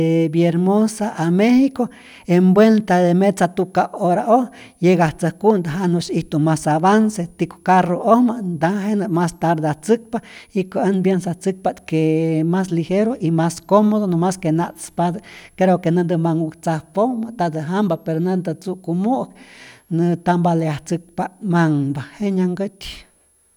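Speech carries a faint switching supply whistle throughout, a thin high tone drifting between 9.5 and 11.8 kHz, some 45 dB down, showing as a wandering horizontal line on a spectrogram.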